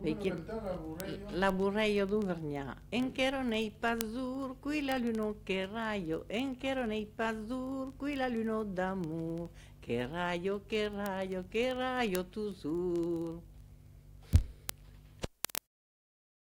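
From 0.12 s to 16.46 s, word clock ticks sound as sharp clicks of uneven strength, roughly every 30 ms. The receiver's free-running clock drifts around 700 ppm from the sender's, so hundreds of single samples are dropped or repeated as the clocks slip.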